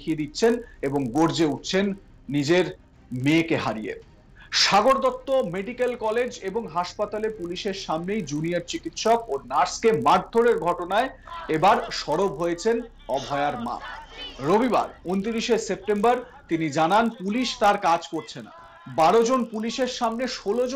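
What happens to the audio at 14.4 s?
At 14.4 s the sound carries a steady rough buzz at 50 Hz, a rapid train of tiny ticks that rides on the signal and drops away whenever it falls silent. This is the resampler restarting on every block: the conversion from 16 kHz to 48 kHz runs on 20 ms blocks separately, so each block edge is computed without its true neighbouring samples. The fault runs through the whole clip, not just this moment.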